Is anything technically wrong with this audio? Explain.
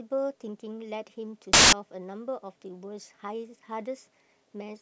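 Yes, there's one clear fault. From about 1.53 to 1.73 s the speech drops out under a burst of loud broadband noise. That's samples built from the wrong bytes: for that stretch the reader assembles each sample with its bytes misaligned or swapped, so the rapidly changing low-order bits end up as the big part of every value. The result is roughly 0.19 s of harsh full-band hiss.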